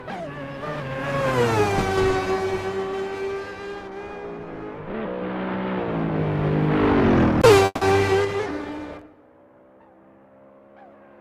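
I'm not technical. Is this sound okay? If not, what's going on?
No. A long network dropout, likely a stalled connection, hits at 7.65 to 7.83 s: the last sound smears into a fading buzz, goes briefly silent, and a moment of audio is lost.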